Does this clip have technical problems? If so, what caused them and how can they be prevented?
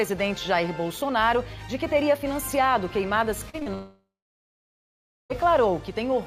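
Yes. Short concealed packet loss occurs three times, at 3.49 to 3.55 s, 3.59 to 3.63 s and 3.63 to 3.68 s. The receiver extended the previous sound over each gap, causing brief smears. A steadier network path and a larger jitter buffer prevent this.

A long network dropout follows from 3.74 to 5.32 s. The concealment fades, then about 1.2 s of silence remains. The sound resumes with the missing stretch gone. The likely cause is a stalled connection. A more reliable link, such as wired instead of congested wireless, would prevent it.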